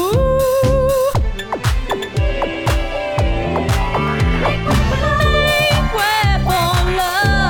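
Sharp single clicks occur at 1.92, 4.08 and 6.88 s. Each is likely dropped samples: a fraction of a millisecond goes missing, so the waveform jumps abruptly.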